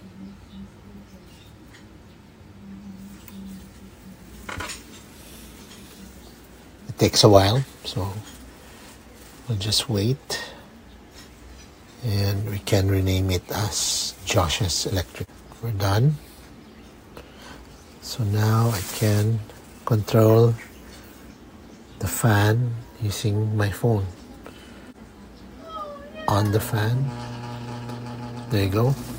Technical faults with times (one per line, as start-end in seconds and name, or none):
none